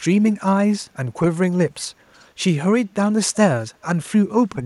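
From 2.14 to 2.25 s a very faint echo leak surfaces: a copy of the speech returning 371 ms late, likely residue that a far-end echo canceller failed to remove. A spectrogram shows a weak, time-shifted ghost of earlier harmonics, and the waveform barely changes.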